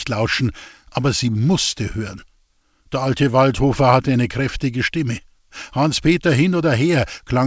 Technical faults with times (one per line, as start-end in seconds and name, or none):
none